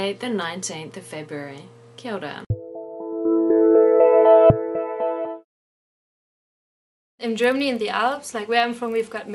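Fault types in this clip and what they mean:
Resampler restarted on every block: each 40 ms block was converted on its own, leaving edge errors heard as a 25 Hz buzz from 7.24 s onward.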